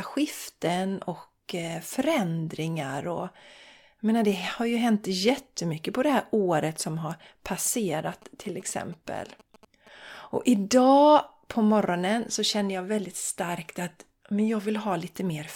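From 7.66 to 9.89 s, a galloping dit-dit-dit of short buzzes sits some 25 dB under the speech. These are GSM signalling bursts: a 2G phone close by is exchanging brief groups of radio bursts with the network, as it does before a call or message comes in, and the audio circuitry rectifies that RF into sound. The bursts repeat at 216.7 Hz, the GSM frame rate, giving the buzzes their characteristic rasp.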